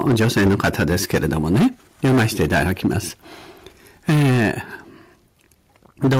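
Speech with heavy microphone overload at 0.01–1.68 s, 2.04–2.99 s, 4.08–4.5 s and 6.03 s to the end, its flattened peaks crackling harshly, likely from input gain set about 10 to 14 dB too hot. The microphone volume stepped down by about 2 dB at 0.08 s and 4.1 s, each level drop likely an automatic gain correction reacting to the clipping.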